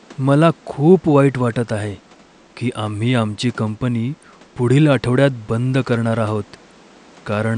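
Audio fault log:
The signal has no technical faults; the only other sound is the room's own background noise, about 30 dB below the speech.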